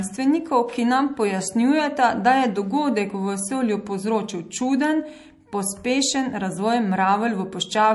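Low-bitrate audio saved at a high bitrate runs through the whole speech clip. The speech carries the smeared, swirly detail of a heavily squeezed MP3, which fits a first encode at roughly 48 kbit/s, even though the file itself sits at a much higher rate that points to 192 kbit/s. The likely cause is a re-encode of that small MP3. The larger second copy cannot bring back what the first encoder discarded, so those artefacts remain.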